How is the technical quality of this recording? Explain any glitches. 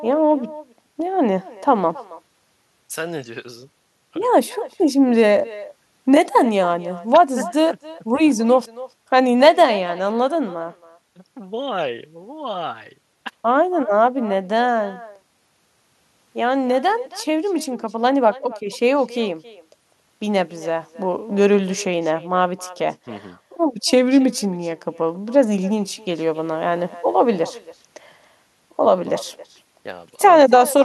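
The recording has one fault, present from start to finish: echo with no canceller. At the far end, the call is played on a loudspeaker and picked up again by the microphone there, and nothing strips it out before it returns. Every phrase of speech is followed, roughly 300 ms later, by a thin copy about 20 dB quieter. Room reverberation smears straight off the tail of each sound, but this copy arrives as a distinct, delayed repeat.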